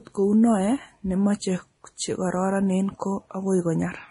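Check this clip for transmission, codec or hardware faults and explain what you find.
The speech carries a codec fault that runs through the whole clip: transcoding between lossy codecs, with the audio likely passed through a Vorbis encode and then re-encoded as MP3. The second encoder spends its limited bits on the first encoder's artefacts, then adds its own, so both kinds of artefact sit together. The different artefacts are heard together, consistent with low bitrates of roughly 30 and 40 kbit/s. A spectrogram shows nothing above 10.6 kHz and a blotchy, speckled texture below it.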